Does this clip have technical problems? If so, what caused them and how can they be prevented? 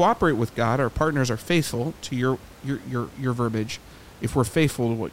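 No, nothing in this speech clip stood out as a technical problem on listening.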